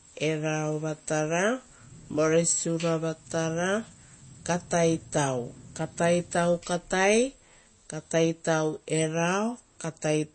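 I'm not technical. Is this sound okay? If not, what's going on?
No. Throughout, the speech sounds watery and dull, with nothing above about 8.3 kHz, which points to likely heavy MP3 compression squeezing the file too hard.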